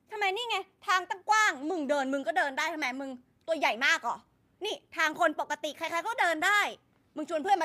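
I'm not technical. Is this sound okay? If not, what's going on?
Yes, nothing in this recording stood out as a problem when I listened to it.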